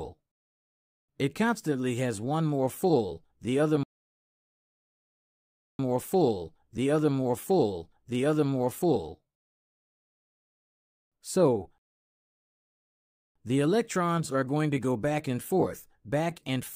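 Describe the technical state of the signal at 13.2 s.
Silence: the sound halts at 11.78 s and stays dead until 13.36 s, then picks up exactly where it broke off. It's a rebuffering stall, with the player starved of downloaded audio and waiting for more, adding about 1.57 s without losing anything.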